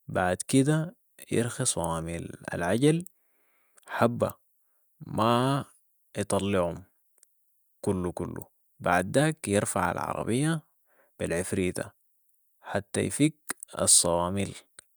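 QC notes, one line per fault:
No technical faults detected.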